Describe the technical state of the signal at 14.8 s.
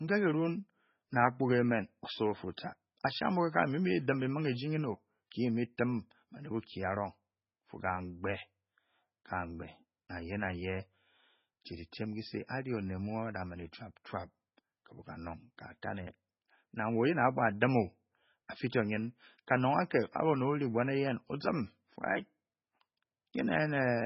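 The speech at 14.8 s has heavy damage of the kind MP3 compression leaves, present throughout the clip and likely caused by a very low bitrate, around 16 kbps. Nothing remains above 5.6 kHz, so the encoder has cut the treble and dropped weak spectral lines that flicker between frames. The result is a watery, swirling texture with chirpy s sounds and blurred onsets. That flickering is what separates it from a simple low-pass filter, which would dull the sound evenly.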